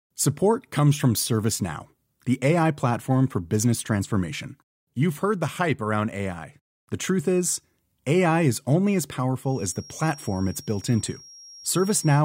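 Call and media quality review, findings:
Feedback whistle, 9.40–12.24 s (end), after "is only as". Thin steady tone at 5.6 kHz, around 25 dB under speech, slowly swelling and fading. Likely loudspeaker-to-microphone loop at the edge of feedback: rings on without building into a howl.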